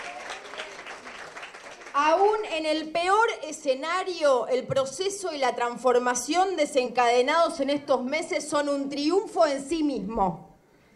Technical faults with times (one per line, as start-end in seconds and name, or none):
6.85 damaged data in a compressed stream
9.17 damaged data in a compressed stream